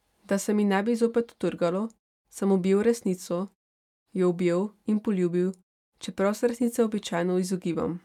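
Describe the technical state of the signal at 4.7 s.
At 4.7 s the tempo is slightly unsteady, with small hiccups where short slices of speech are repeated. These repeated timing corrections run from 0.34 s to 7.73 s at about 98% speed and stretch the passage by roughly 150 ms. The receiver is padding out the sound to keep pace with a slower source.

Behind this is clock drift between sender and receiver. The sender's clock runs roughly one and a half percent slow, so the receiver's jitter buffer keeps draining and has to be topped up with repeated fragments at uneven intervals throughout the clip.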